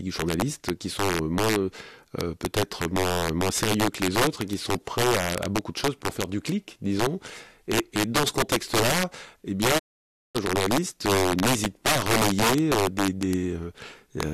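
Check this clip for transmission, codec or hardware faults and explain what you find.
Two faults are present in this speech recording. One runs through the whole clip and one is a single break.

Integer overflow affects the clip throughout. The signal is driven about 9 dB past the integer limit. Nothing clamps it there. Any peak that exceeds the top value wraps around to the opposite extreme. Only the loudest moments cross the line, roughly three percent of samples. Each one produces a violent crack on loud syllables, far harsher than ordinary clipping.

A digital broadcast dropout occurs from 9.77 to 10.37 s, just after "eh bien". The receiver stopped getting valid frames and muted its output until clean data returned. The sound fades out over about 20 ms. About 550 ms of programme is then missing. It resumes on "journalistes euh n'hésitent pas". Whatever was said in the gap cannot be recovered.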